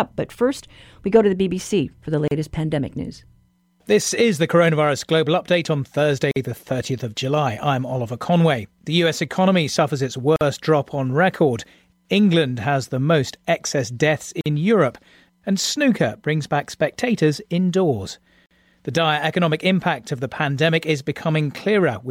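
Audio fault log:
2.28–18.51 s, gap at a join of encoded pieces: the speech drops out briefly at 2.28, 6.31, 10.36, 14.41 and 18.46 s, every 4.0 s. The first lasts 34 ms, between "for the" and "pandemic news", and the rest 49 ms each, including one between "economy suffers its" and "drop on record". The audio was evidently encoded in 4-second pieces and butted together untrimmed, so each encoder's start delay and padded last frame leave a short hole with smeared edges before the speech picks up where it stopped.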